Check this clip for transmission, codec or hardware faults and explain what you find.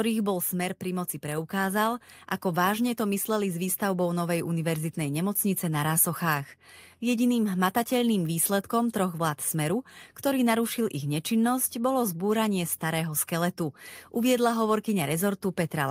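Two gain faults sit at the very start of this speech clip. The level dips and then recovers within the first two seconds.

Automatic gain falling runs from 0.05 to 0.85 s. The automatic gain control judged the incoming level too high. It pulled its gain down step by step, by about 4 dB. You hear the sound start loud and then sink. The background sinks with it, because the whole signal is scaled, not just the voice.

Automatic gain rising follows from 0.81 to 1.96 s, overlapping the end of the dip. Now the control judged the level too low. It raised its gain gradually, by about 4 dB, over roughly a second. Voice and background swell together. The level has recovered by the phrase "ako vážne to mysleli". The fall and rise form a short dip-and-return in level.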